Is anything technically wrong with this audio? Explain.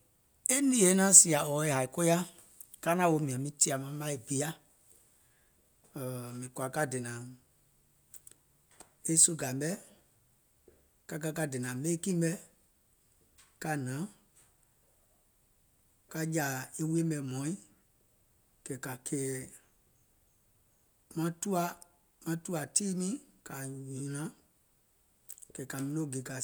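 No, nothing technically wrong turns up anywhere in this speech recording.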